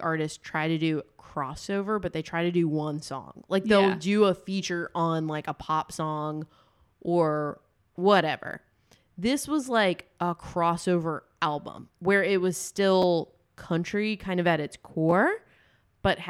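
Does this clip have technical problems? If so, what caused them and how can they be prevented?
Yes: chunks out of order at 13.02 s, after "album where it was", and 15.09 to 15.12 s, after "kind of at its". Tiny 5.8 ms blocks played one, then three places late, giving jumbled moments with nothing missing, unlike a dropout. Writing chunks by sequence number into a correctly synchronised buffer prevents it.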